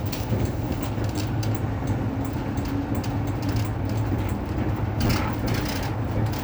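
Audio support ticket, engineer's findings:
Repeated buffer at 1.18–1.20 s and 5.07–5.09 s: brief buzzy click, one roughly 10 ms chunk played twice more with hard joins. Playback underrun, device replaying last buffer; little or no audio lost.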